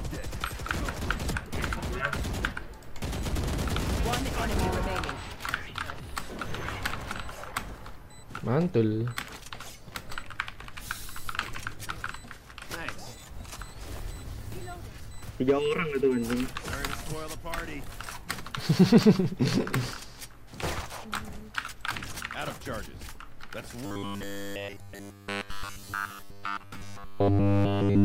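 At 23.86 s the sound turns into a rigid, metallic buzz that lasts to 28.04 s, the end of the clip. This is robotic sound from repeated short buffers. It likely comes from audio arriving too seldom, so nearly all of it is replaced by repeats of a 10 ms slice. That repeat rate fixes a 100 Hz buzz over everything.

At 24.79 s, inside the buzz, compressed frames were skipped. About one 26.1 ms frame, roughly 30 ms of audio, never played. The sound jumps ahead.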